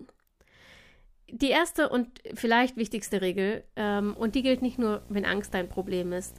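From 3.81 s to the end, video or display buzz appears. A display feed couples into the audio, adding a 60 Hz buzz with hash, well below the speech.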